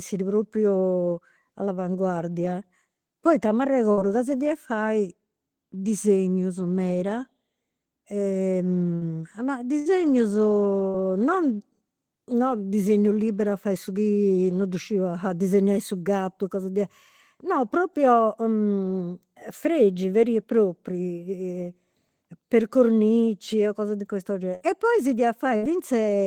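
Bursts of packet loss at 3.91 s (before "ca si fia fai"), 8.95, 9.79, 10.88, 24.55 (after "cornici cose di questo") and 25.56 s (after "poi si"). Each loses about 60 ms. Unlike a clean dropout, the gap is filled with a fading held buzz or hiss before the sound resumes further on.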